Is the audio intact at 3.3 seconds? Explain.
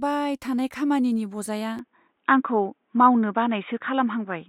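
No. At 3.3 s the audio sits inside a degraded stretch that runs from 1.79 s, just after "थानाय खामानिनि बजाया", to the end of the clip. The sound turns dull and narrow, with nothing above 3.8 kHz, a level shift of a few decibels and a faint new noise floor well below the signal, all with no gap at the change. This pattern most likely reflects the input switching to a poorer device with a narrower passband.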